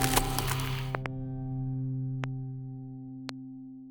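Loud pops strike three times. Between 0.95 and 1.08 s, two land in quick succession, followed by single pops at 2.24–2.26 s and 3.29–3.31 s. Each is a sharp thump standing roughly 20 dB above the audio, likely a voltage pulse from a plug, switch or static discharge entering the signal path. Unlike a dropout click, nothing is missing: the sound runs on unbroken beneath each pop, which simply sits on top of it.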